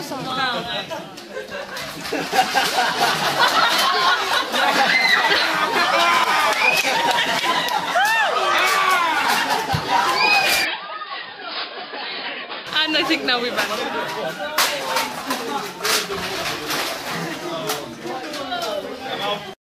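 The audio is fine up to about 10.65 s, then it suddenly goes dull, with nothing left above roughly 5.1 kHz. The level drops by about 5 dB and a faint new noise floor comes in, well below the signal. There's no gap at the changeover. At 12.67 s the full bandwidth comes straight back. That two-second stretch points to an input switched to a poorer device, likely a fallback mic or a headset's call profile taking over briefly.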